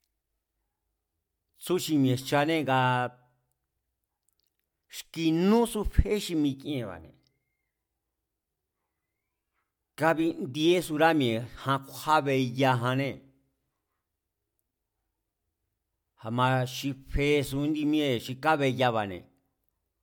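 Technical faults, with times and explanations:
No technical faults can be heard in this recording.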